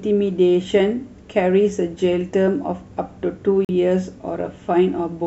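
A Bluetooth dropout cuts the speech at 3.65 to 3.70 s, leaving a silent gap. It was likely caused by packets reaching the headphones too late and being discarded. About 43 ms of audio is lost, which fits two missing frames, and the speech resumes further along.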